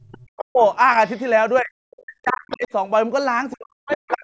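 From 0 to 0.62 s the speech dips sharply, by roughly 40 dB at its deepest. This is speech suppressed in double talk. Both sides were likely talking at once. The echo canceller could not tell the talker from loudspeaker echo and turned everything down. The same dipping returns from 1.61 to 2.69 s and from 3.55 s to the end.

In and around these dips, the other side's voice leaks through. It comes in faint scraps at 0.39 to 0.74 s, 1.06 to 1.22 s, 2.3 to 2.68 s and 3.88 to 4.13 s. It sits about 20 to 35 dB below the speech. The likely cause is loudspeaker playback the echo canceller failed to remove.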